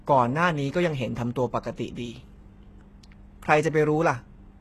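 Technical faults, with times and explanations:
Throughout, HE-AAC compression: the damage is plainly audible, and nothing sits above 12.3 kHz. The top end is likely rebuilt by spectral band replication, where lower bands get copied upward and shaped by a rough envelope instead of being properly coded. Those copied harmonics don't line up with the real ones, so s sounds come out gritty and lispy. The heaviness fits a very low bitrate, around 16 kbps.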